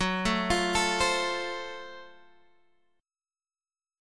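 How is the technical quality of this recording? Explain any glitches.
No glitches to explain here: nothing jumps out as a technical problem anywhere in the recording.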